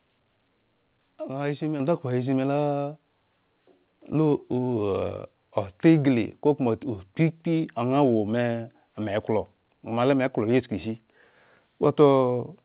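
Speech that comes through a call path with nothing above 4 kHz, which fits G.711 A-law telephone coding. At 1.80 s, just before "ndakhpo he zhin", there's a microphone volume stepped up fault: the call software judged the mic too quiet and bumped the input gain in one go, so voice and background both jump by about 6 dB together.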